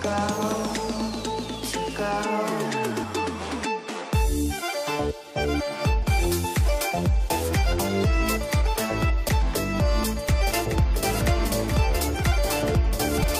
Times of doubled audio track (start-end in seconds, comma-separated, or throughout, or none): 10.29-13.39